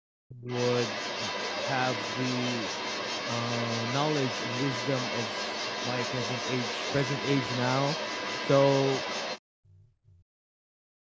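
Speech suppressed in double talk, 0 to 0.49 s: the speech sinks sharply, as much as about 40 dB at its deepest, for roughly half a second. Both ends were likely talking at once, so the echo canceller could not separate the local talker from loudspeaker echo and turned everything down.

Other side's voice leaking through, 0.47 to 9.41 s: a second voice runs beneath the speech for most of the clip, only around 5 dB quieter. The far end is likely playing through the device's loudspeaker, and the echo canceller failed to strip that sound from the microphone signal.

Speech suppressed in double talk returns at 9.55 to 11.02 s. For about a second and a half the speech again drops by up to about 40 dB as the canceller clamps down on the overlap. Throughout, the band stops at 8 kHz.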